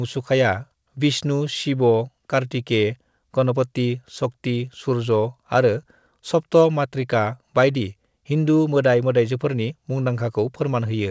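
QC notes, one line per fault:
throughout: clock drift between sender and receiver. The sender's clock runs roughly 4 percent fast. Audio arrives quicker than it is played out, so the jitter buffer keeps filling. Small timing hiccups recur at uneven intervals. Nothing is heard above 8 kHz, which fits a wideband call codec.
0.04 to 11.10 s: repeated timing corrections. The receiver keeps cutting short pieces to shed the surplus. Effective speed is 105 percent. Every edit trims, never repeats. They are unevenly spaced and small, heard, if at all, as slight skips or an unsteady tempo.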